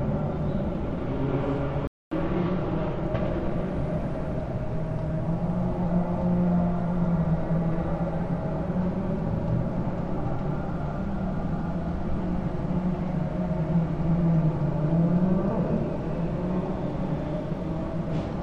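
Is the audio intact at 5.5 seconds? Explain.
Yes, the audio at 5.5 seconds is intact, with no fault present at that moment.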